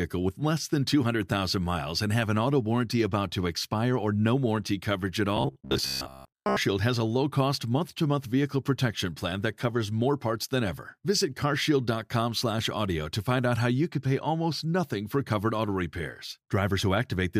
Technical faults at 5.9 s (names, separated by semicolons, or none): robotic sound from repeated short buffers